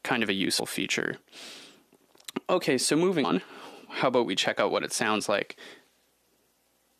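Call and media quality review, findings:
Compressed frames skipped at 0.58 s and 3.23–3.25 s: the audio jumps ahead roughly 70 ms, then roughly 100 ms. This points to about three and five 23.2 ms frames missing or rejected by the decoder.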